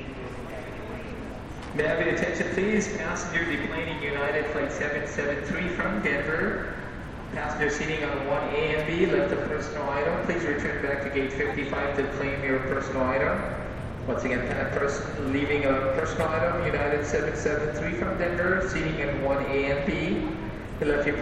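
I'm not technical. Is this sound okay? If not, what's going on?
Yes, nothing in this recording points to a technical fault.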